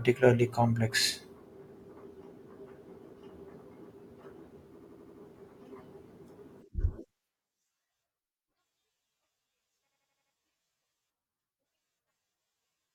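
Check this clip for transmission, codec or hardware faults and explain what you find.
There's one fault here, happening twice: a system hang loop, from 4.78 to 5.21 s and again from 9.90 to 10.33 s. In each, the driver or machine stalls while the sound hardware keeps replaying its ring buffer, so an 85.33 ms slice of speech repeats five times at about 11.7 Hz, which fits a 4096-sample buffer. You get a quick machine-gun stutter, after which the speech picks up with next to nothing missing.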